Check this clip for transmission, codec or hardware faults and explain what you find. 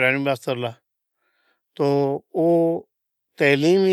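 I find no faults in this clip.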